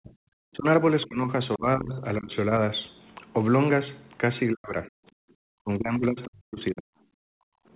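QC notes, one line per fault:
0.03–0.66 s, 1.06–2.52 s, 4.51–4.96 s and 5.6–6.91 s, speech suppressed in double talk: the talker's speech sinks in pieces, by roughly 40 dB in the first, third and fourth spans and by roughly 20 dB in the second. The affected stretches are short, from a few hundred milliseconds to around a second. The likely cause is an echo canceller that could not separate the talker from loudspeaker echo and turned both down. The cue is the talker's own speech thinning and breaking up, not the room sound.
1.02–1.06 s, other side's voice leaking through: a brief scrap of a second voice sits under the signal, roughly 30 dB below the talker, just before the second suppressed span begins. It is a residue that the canceller likely failed to remove from the microphone feed. It differs from suppression because something is added rather than taken away: a faint foreign voice instead of the talker dipping.
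5.24–5.32 s and 7.19–7.68 s, background gated by the echo canceller: the room tone dips by about 40 dB, for a flicker of about 70 ms in the first span and for about half a second in the second, then returns once the canceller releases. The canceller is clamping the microphone while the loudspeaker plays. What sets this apart from double-talk suppression is that the dropout hits the background bed rather than the talker's speech.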